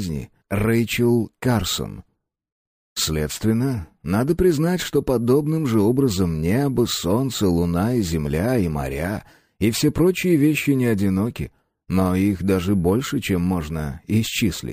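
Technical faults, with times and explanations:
Throughout, imaging from sample-and-hold upsampling: a bright, metallic fizz sits above the sound and rises and falls with it. The lowest mirror copy fills roughly 11.03 to 22.05 kHz at about 23 dB below the signal, and it moves opposite to pitch. This points to a rate raised from about 22 kHz to 44.1 kHz by repeating each sample without a smoothing filter, so the original spectrum is reflected above the old limit.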